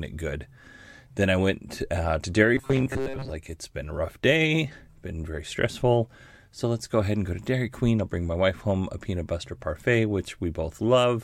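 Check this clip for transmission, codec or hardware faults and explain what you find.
There's one fault here. From 2.55 to 3.30 s the speech goes into robotic sound from repeated short buffers, a rigid metallic buzz at 134 Hz. That likely comes from audio arriving too seldom, so a tiny slice of about 7.5 ms gets looped to fill most of that stretch.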